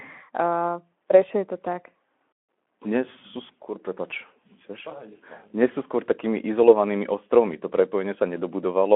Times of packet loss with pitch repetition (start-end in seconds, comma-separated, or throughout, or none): none